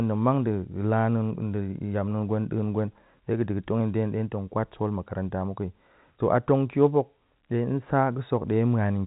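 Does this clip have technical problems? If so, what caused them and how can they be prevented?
No, the speech carries no technical faults; it sounds like an ordinary G.711 telephone channel, with nothing above about 3.8 kHz, which fits 64 kbps A-law coding working as designed.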